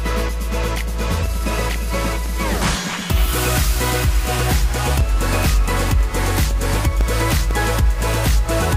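From 1.26 s to 8.51 s there are periodic USB or driver dropouts. A tick repeats every 0.25 s, around thirty in all. Each marks a gap of about a millisecond where the audio stream briefly stalled. Something kept interrupting the USB bus or the audio driver on a fixed schedule. The missing audio was filled with silence. The gaps are too short to hear as holes. They come through as a steady train of small clicks over the sound.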